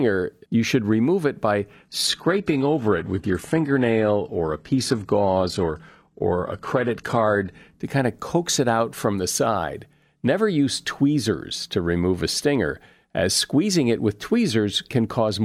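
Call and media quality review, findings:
Adaptive stream at a lower bitrate, 1.74 to 7.74 s, after "should remove it by" until "to kind of coax". Abrupt, gapless dulling and synthetic treble, consistent with an AAC-LC near 96 kbit/s to HE-AAC near 16 kbit/s switch as the connection slowed. Spectrogram: hard ceiling at 12.3 kHz, smeared replicated upper band. Waveform: no dropout at either edge.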